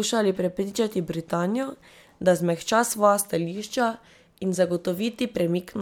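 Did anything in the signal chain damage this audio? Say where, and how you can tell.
No, nothing I can hear points to any stage of the chain having damaged this speech recording, so there's no problem here to trace back.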